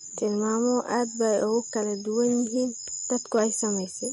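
A short speech recording with audible codec damage all the way through: nothing comes through above about 11.2 kHz, and the sound has that watery, swirly quality where weak frequency lines flicker in and out between frames. That's most likely MP3 compression, and the damage fits a low bitrate around 48 kbps. Separately, there's a burst of hard clipping from 3.35 to 3.41 s, where peaks were driven about 2 dB past what the stage could pass and got sliced flat, giving a brief crackle on the peaks.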